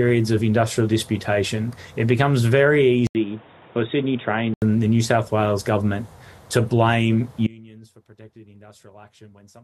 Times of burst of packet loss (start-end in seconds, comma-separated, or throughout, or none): none